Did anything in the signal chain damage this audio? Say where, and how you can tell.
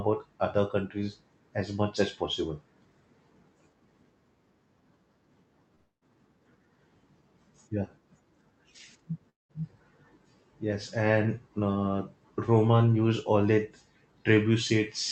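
Yes, at the network. Around 5.75 to 6.03 s and 9.29 to 9.51 s the sound fades into a smeared buzz, then silence. That's likely a long network dropout.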